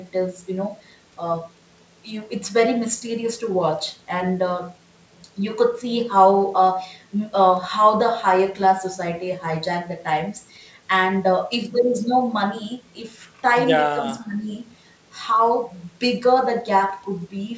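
From 13.94 to 14.5 s, the echo canceller likely mistook overlapping talk for echo, so speech is suppressed in double talk and the voice dips around 10 dB in brief patches.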